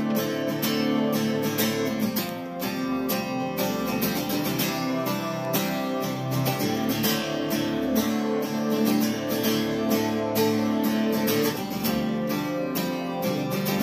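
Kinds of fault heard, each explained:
Bit error spike: at 2.29 s and 5.45 s, a flipped bit throws one sample, then two in a row, to a wrong value that snaps straight back, leaving a brief broadband tick unrelated to the surrounding sound, peaking near about -12 dBFS and about -24 dBFS respectively.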